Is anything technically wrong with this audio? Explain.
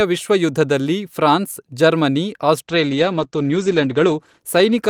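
Yes. From 2.63 s, after "ವಿಶ್ವ ಯುದ್ಧದಲ್ಲಿ ಫ್ರಾನ್ಸ್ ಜರ್ಮನಿ", a call bitrate drop from 64 to 16 kbps coarsens coding and cuts bandwidth from 20 kHz to 8 kHz. The speech sounds muffled and watery, and the spectrogram goes blank above 8 kHz.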